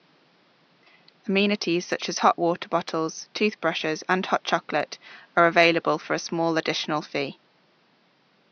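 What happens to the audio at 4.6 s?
Nothing goes wrong at 4.6 s: the speech there comes through intact, with only the room's own background noise sitting about 38 dB below it.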